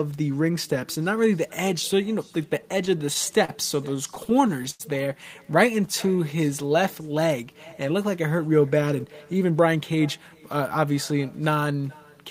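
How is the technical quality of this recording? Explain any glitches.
The recording has a persistent echo and four stretches where the receiver's jitter buffer disturbed the timing of the speech.

The echo with no canceller runs through the whole clip. The far end is playing the call over a loudspeaker, its microphone picks that up, and nothing subtracts it, so the talker's own voice returns after the network round trip. Every phrase is trailed, roughly 0.4 s later, by a faint, thin copy sitting about 26 dB below the speech.

Repeated stalls (stutter) occur from 2.61 to 3.50 s and again from 3.96 to 4.82 s. Packets arrived late or too slowly, so the jitter buffer kept draining, and each time the receiver stretched the last sound until data resumed. In the first span, about 105 ms is filled across short gaps, the longest 37 ms. In the second, 152 ms is filled, with one gap reaching 94 ms. 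Nothing is lost, but the speech catches and drags, noticeably more in the second span.

The jitter buffer slow-down runs from 5.72 to 6.82 s. The buffer was running low, so to rebuild a reserve the receiver repeated individual pitch periods and slivers of pauses, adding about 83 ms. The speech plays at 93% speed with its pitch unchanged, so sounds are drawn out and the delivery feels sluggish.

The jitter buffer speed-up runs from 8.81 to 10.35 s. Here the buffer held more audio than its target, so the receiver trimmed short pitch-period-sized pieces, removing roughly 150 ms in total. The speech plays at 110% speed at the same pitch and comes across as hurried.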